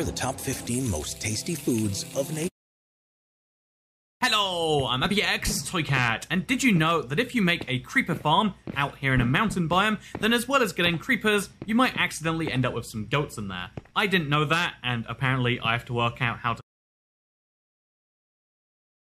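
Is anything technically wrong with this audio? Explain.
No, nothing is technically wrong with this audio.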